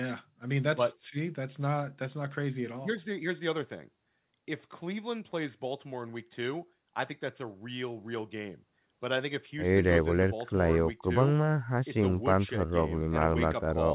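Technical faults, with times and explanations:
No technical faults can be heard in this speech.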